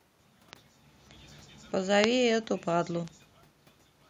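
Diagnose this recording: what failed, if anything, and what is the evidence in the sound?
Bit error spikes at 0.53, 2.04 and 3.08 s, each a lone sharp broadband tick unrelated to the speech around it. A flipped bit in memory or on a digital link throws one or two samples off by a power of two before they snap straight back.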